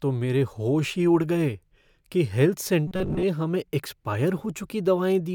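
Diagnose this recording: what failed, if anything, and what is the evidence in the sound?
Robotic sound from repeated short buffers runs from 2.87 to 3.24 s, between "उड़ गए कि हेल्थ" and "हमें एक्सपायर". The speech turns into a rigid, metallic buzz at 188 Hz. About half of it is repeated. The likely cause is a driver or buffer underrun that replayed a roughly 5.3 ms block.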